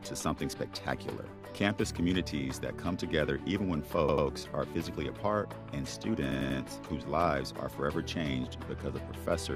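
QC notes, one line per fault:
4.09–4.27 s and 6.32–6.60 s, repeated buffer: a block of about 93 ms, which fits a 4096-sample buffer, plays again twice and then three times because fresh audio arrived late. Hard joins make each repeat a stutter, with essentially nothing skipped.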